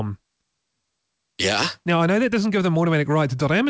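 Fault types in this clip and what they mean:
No faults; the speech shows nothing above 8 kHz, which fits a normal wideband call path such as G.722 at 64 kbps.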